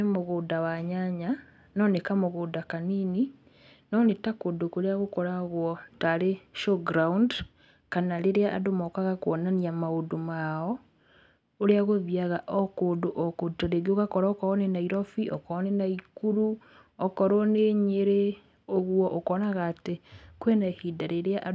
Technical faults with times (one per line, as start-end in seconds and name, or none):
none